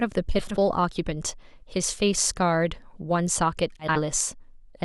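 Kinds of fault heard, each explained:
frames out of order: Two adjacent 80 ms runs, which fits four frames apiece, arrived swapped and were decoded that way. The speech at 0.39–0.57 s and 3.80–3.99 s plays with its halves exchanged, a garbled flutter.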